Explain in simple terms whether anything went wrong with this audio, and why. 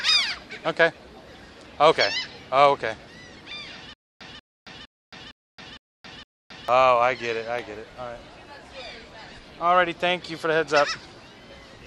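From 3.93 to 6.68 s there is a stutter with silent gaps: a short 190 ms burst of sound repeats six times, each followed by about 270 ms of dead silence. Playback likely stalled and kept replaying its last fragment, so the audio meant for that stretch is missing.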